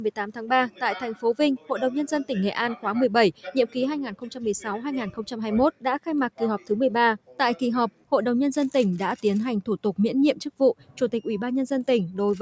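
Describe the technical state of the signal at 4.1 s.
At 4.1 s you're inside a stretch where the sound gets cut by the noise suppressor, running from 3.33 to 4.46 s. The suppressor has mistaken this material for noise and pulled it down harder than the surrounding audio, bottoming out at about 10 dB below where it should sit. It bites for roughly 0.7 s in total across that window, so sustained or decaying parts sink or get their tails clipped, while sharper onsets still come through.

That dip sits within a broader problem: a speech-oriented noise suppressor applied to sound it wasn't built for, active for the whole clip. It treats steady content and ambience as noise and keeps riding the gain, with swings of around 10 dB. The result is pumping and a thinned, fluttery sustain, with attacks surviving and held parts sagging. The call microphone processing is also present here, with nothing above 8 kHz, and that's expected.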